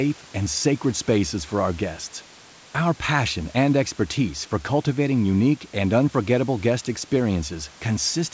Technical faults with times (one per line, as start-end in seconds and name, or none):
none